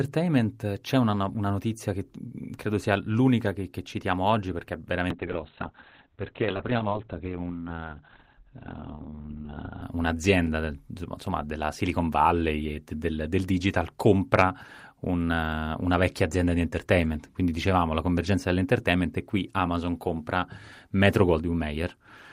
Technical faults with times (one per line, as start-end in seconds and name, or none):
5.11-9.88 call bitrate drop